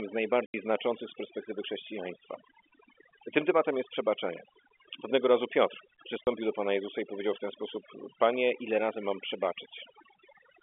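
Overdone noise removal runs through the whole speech clip: bands near the noise floor are cut away, leaving near-silent gaps with twinkling specks, seen as speckled, hollowed-out patches on a spectrogram. At 0.46 to 0.54 s, packet loss filled with silence drops 80 ms of audio, and again at 6.24 to 6.27 s for 30 ms. Both lengths fit 10 ms packets. Each gap is a silent block with hard edges, audible over the telephone band of about 250 Hz to 3.4 kHz.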